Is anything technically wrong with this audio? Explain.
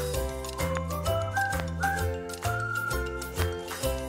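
Yes. There are three loud pops, at 0.77 to 0.79 s, 1.60 to 1.62 s and 3.42 to 3.44 s. Each is most likely a brief voltage spike entering the chain, for example from a connector, a switch or static. The following circuitry smooths it into a single short burst about 15 dB above the audio for the first pop and about 20 dB for the other two. Each lands as a sharp, isolated pop while the sound continues beneath it.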